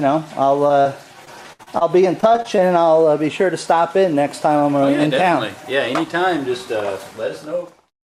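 Short concealed packet loss occurs at 0.67 to 0.71 s and again at 0.81 to 0.87 s. About 20 ms and then 40 ms of audio failed to arrive in time. The decoder patched each hole by extending the preceding sound before blending back, leaving a brief smear or wobble.

Repeated packet loss (robotic sound) follows at 1.25 to 1.83 s and 2.21 to 2.61 s. The first stretch has four gaps totalling 140 ms, the longest 65 ms. The second has five gaps totalling 100 ms, none longer than 21 ms. Concealment fills about 23% of each span, and the back-to-back patches make the audio choppy and robotic, with pieces missing.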